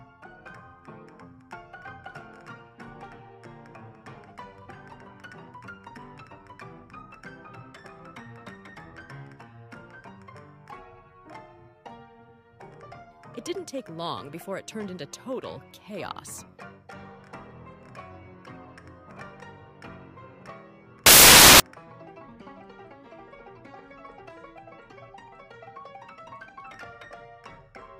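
At 21.06 s there's a burst of samples built from the wrong bytes, running to about 21.60 s, so roughly half a second. The reader is stitching each sample together from misaligned or swapped bytes, so the busy low-order bits end up driving the big part of every value. What you get is a blast of loud, harsh broadband noise that swamps the sound.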